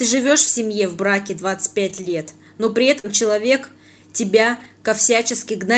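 From 1.89 to 2.11 s the speech turns grainier and noisier for about 120 ms. This is a lost packet rebuilt from error correction. Several separate packets went missing, and the decoder played the low-bitrate copies carried in the packets that followed, so no gap opens. The same roughening returns briefly at 3.04 to 3.06 s and again from 4.56 to 4.66 s, about 60 ms there.

Between 2.99 and 3.06 s, there is a quick smear where about 40 ms of audio never arrived in time. This is short concealed packet loss. The receiver extended the preceding sound for roughly 44 ms before blending back into the real signal, which then picks up the rebuilt 20 ms at its tail.

The Opus call path adds its usual coding noise, and its bandwidth tops out near 8 kHz.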